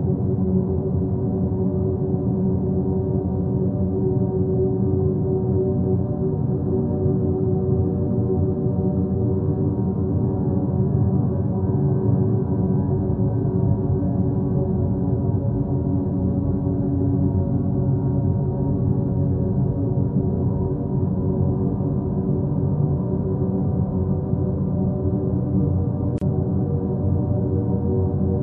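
Throughout the audio quieter detail turns watery and swirly, with metallic chirps on sharp sounds and smeared attacks, plainly audible damage that likely comes from MP3 compression at a low rate, consistent with about 64 kbps. At 26.18 to 26.21 s a gap at a join of encoded pieces opens a gap of about 34 ms with smeared edges before the sound resumes where it stopped, caused by encoder delay and end padding left in when separately encoded segments were spliced together.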